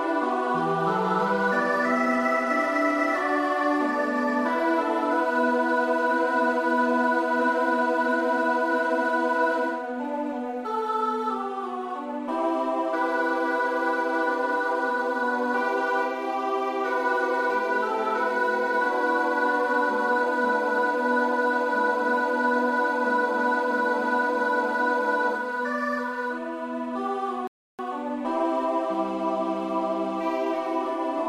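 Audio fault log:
27.47 to 27.79 s, rebuffering stall: playback runs dry of downloaded audio and falls silent for about 0.31 s, then resumes exactly where it stopped, losing nothing. The waveform shows a flat gap, and the spectrogram a blank vertical band across all frequencies.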